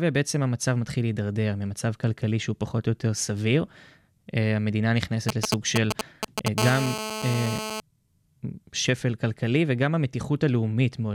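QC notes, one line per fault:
5.29–6.48 s, GSM signalling bursts: a galloping dit-dit-dit of short raspy buzzes about as loud as the speech itself, from a nearby 2G phone handshaking in short radio bursts that the audio circuit rectifies into sound at roughly 217 Hz.
6.58–7.80 s, GSM phone buzz: a steady, hard, harmonic-rich buzz at 217 Hz sitting about 6 dB under the speech, the phone now in a call and transmitting continuously in bursts, which the circuitry demodulates into that rasp regardless of the audio.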